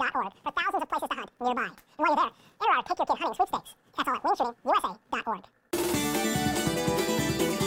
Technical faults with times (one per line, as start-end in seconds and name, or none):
0.00-7.67 audio read two samples at a time (double speed)